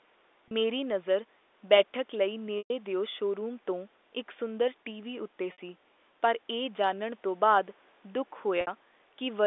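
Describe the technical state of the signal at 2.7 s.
At 2.7 s, packet loss with pitch repetition ends a 120 ms gap from 2.58 s: the repeated pitch period buzzes, fades to silence, then cross-fades back, unlike a hard dropout.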